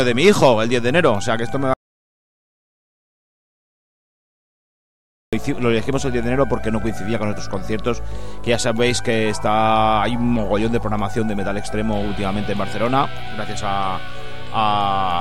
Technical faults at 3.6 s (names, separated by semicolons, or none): audio dropout to silence